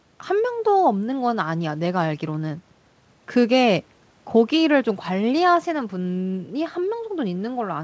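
Speech over a call path with nothing above 8 kHz, consistent with a wideband codec such as G.722, and no faults found.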